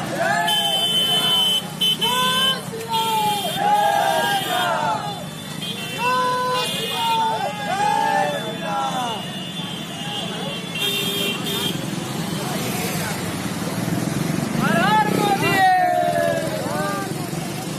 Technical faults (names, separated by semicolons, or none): none